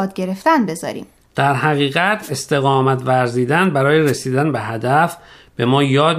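At 2.21 s and again at 4.05 s the speech is briefly hit by a wireless microphone noise hit, lasting about 0.1 s and 80 ms. Each is the FM radio link fading as reflected signals cancel, letting receiver hiss surge. Unlike a digital dropout, which leaves a gap of silence, these fill the moment with a rushing swish of static.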